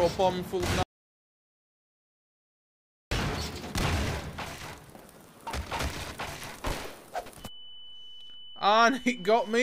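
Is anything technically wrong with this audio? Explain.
Yes. From 0.83 s to 3.11 s there's an audio dropout to silence, about 2.28 s of dead silence with no room tone at all. The sound cuts off mid-flow and returns abruptly, likely because the input link failed while the recorder kept writing silence.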